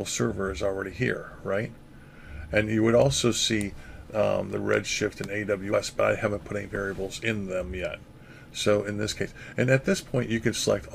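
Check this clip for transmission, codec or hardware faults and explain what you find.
One codec fault appears twice. At 5.72 s and again at 9.51 s, compressed frames are skipped. At each point the decoder never plays a short run of compressed data, either because it is absent from the file or because it was rejected as corrupt. The sound jumps ahead by about 50 ms, which fits a couple of frames.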